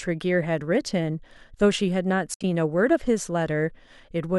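From 2.34 to 2.44 s, AAC frame loss with muting leaves a soft-edged hole in the speech, its longest silent stretch roughly 70 ms. Unlike a hard dropout, the overlapping windows fade it out and in, over a light grain likely from low-delay AAC compression.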